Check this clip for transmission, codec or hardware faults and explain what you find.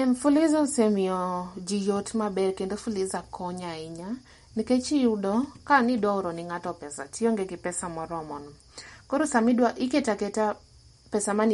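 One codec fault runs through the whole speech clip. Throughout, the audio sounds watery and swirly with nothing above 11.2 kHz, which likely indicates MP3 compression at a bitrate around 48 kbps, starving weak frequency lines and cutting the treble.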